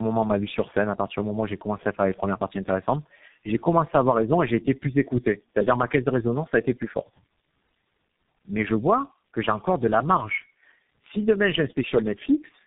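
Tandem speech coding runs throughout this speech. Two low-rate speech coders in a row, the second re-encoding the first's degraded output, leave it rough, warbly and muffled, with nothing above 3.8 kHz.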